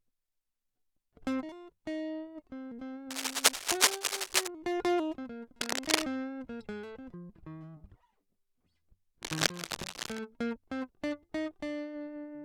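Cable scratch noise rasps over the music from 3.10 to 4.48 s, 5.61 to 6.03 s and 9.21 to 10.20 s, first about 5 dB above it, finally about level, likely a worn connector being moved. Unlike isolated clicks, it forms dense, irregular bursts.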